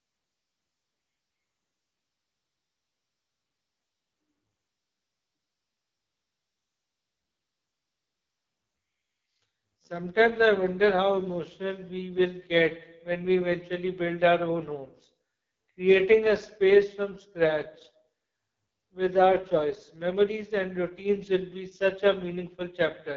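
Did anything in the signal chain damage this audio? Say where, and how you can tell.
Yes, at the codec: it's AMR wideband (HD Voice) the whole way through. Nothing lives above 7 kHz, and the speech sounds rough and raspy throughout, which points to the lowest mode, around 6.6 kbit/s, where the vocal tract model is too coarse.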